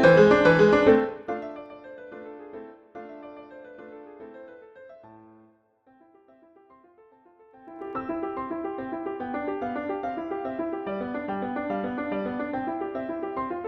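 A fast ticking rides on the sound as it drops by around 25 dB from 0.88 to 1.66 s, then again as it rises by about the same from 7.47 to 7.93 s. This is zipper noise: the gain jumps in unsmoothed 2 dB steps, roughly twenty and then forty times per second.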